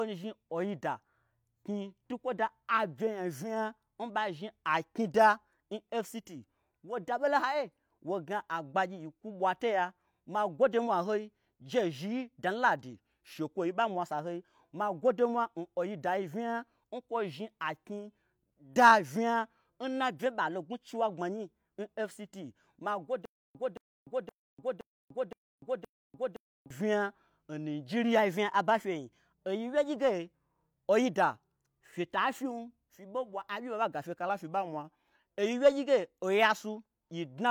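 From 12.94 to 13.79 s the speech suddenly runs about 6% slow and drops roughly 112 cents. That's likely a drift correction step, where clock-matching software nudged the playback rate to rebalance its buffer. Right after "da vnya nna bye", 20.26 to 20.94 s goes the other way, 6% fast and about 105 cents sharp, likely the same correction.

From 23.25 to 26.70 s there's a stutter with silent gaps: a 224 ms fragment repeats six times, every 518 ms, with about 295 ms of dead silence between repeats. The stream likely stalled and replayed its last chunk on each retry, so the audio from that stretch is lost.

Then 28.19 to 29.96 s, just before "ge oida fyeta fyim", it jumps 6% fast and 105 cents up again, likely another drift correction step. Finally, 34.29 to 35.19 s, just before "oyi wyegyige", it sags 6% slow and about 112 cents flat, likely the rate correction once more.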